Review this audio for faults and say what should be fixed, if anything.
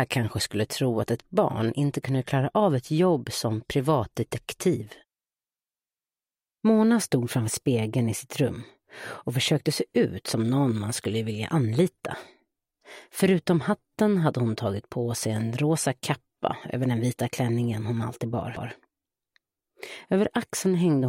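CD skip at 18.56 s: a short tick marks the moment the playback briefly mutes, for only a few milliseconds, and then resumes from a different point in the audio. A knock or a flaw on the disc made the laser lose its track and land on another turn of the spiral, so the sound jumps by a whole number of disc revolutions rather than continuing in order. The section around 18.56 s should be re-ripped from a clean disc. To prevent it, rip with an error-checking extraction tool on a cleaned disc, and keep the drive isolated from knocks and vibration.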